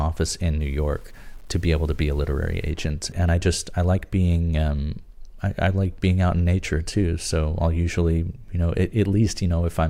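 Speech clip with a grainy distortion from 0.61 to 2.70 s that rises and falls with the signal, about 35 dB below it, roughening quiet passages. The likely cause is low bit depth without dither, with samples rounded to coarse steps consistent with 8-bit quantisation.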